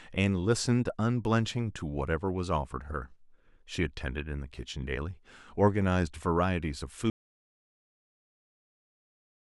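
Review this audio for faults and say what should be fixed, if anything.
Audio dropout to silence from 7.1 s to the end of the clip: the speech cuts off mid-flow and is replaced by silence with no room tone at all, so whatever followed is lost. The likely cause is the input signal disappearing, through a disconnected device, a broken link or an accidental mute, while recording carried on writing silence. Secure cables and wireless links, and monitor input levels during capture so a lost signal is noticed straight away.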